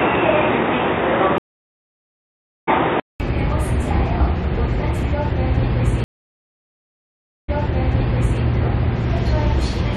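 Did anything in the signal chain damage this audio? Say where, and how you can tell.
Yes. Two separate faults are audible.

From the start to about 3.2 s the audio has nothing above 3.8 kHz. It sounds dull and boxy. At about 3.2 s there is a 200 ms silence, and then the full band returns. The level barely changes, but the early section carries its own faint noise floor, about 55 dB below the signal. This is likely an input switched to a poorer device at the capture or driver stage. The narrower band comes from a different microphone or a headset call profile.

The network stage shows two stream reconnects. At 1.38 s the sound drops out for about 1.3 s and comes back at 2.69 s. It resumes later in the material, by roughly a second and a half, as a live stream does after a break. At 6.04 s another gap of about 1.4 s follows. This time playback resumes 0.93 s earlier, so a stretch repeats before 8.41 s. 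That is a server resending a burst after the player rebuilt its decoder.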